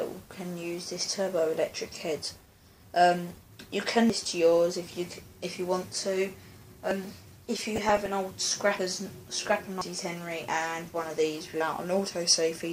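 At 4.10 s the sound jumps forward, skipping roughly a third of a second with no gap of silence. Smaller jumps of about a tenth of a second follow at 6.91 s, 8.79 s and 11.61 s, and one of around 150 ms at 9.81 s. These are likely dropped buffers from an overrun, where audio was overwritten before it was read and the surviving edges were spliced together.

Between 7.57 and 8.07 s, and briefly again from 9.46 to 9.56 s, short blips of noise sit over the sound. This is DAB burbling: a small fraction of a percent of bit errors slipped past error correction, so wrong samples landed in single sub-bands.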